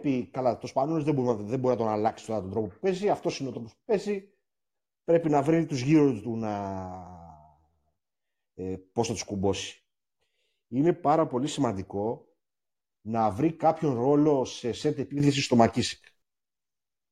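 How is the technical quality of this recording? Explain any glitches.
The speech has two level glitches. Sudden gain jump, 2.08 to 2.24 s and 15.2 to 16.22 s: speech and background noise drop together by about 6 dB, then rise by about 10 dB, likely from gain switched between samples without a ramp.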